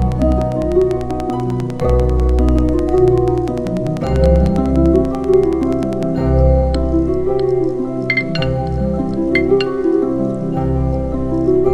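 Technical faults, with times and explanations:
0.02–6.04 s, train of clicks: evenly spaced ticking, about 10 clicks a second, roughly 70 in all, standing a few dB above the sound; likely interference, a faulty connection or a power supply fault.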